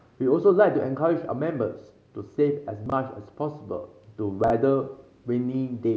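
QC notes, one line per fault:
2.86–2.92 s and 4.44–4.50 s: chunks out of order. In each spot a 20 ms chunk plays two chunks late, after the audio that should follow it, so the speech briefly jumbles across three hard joins. No audio is missing, only reordered.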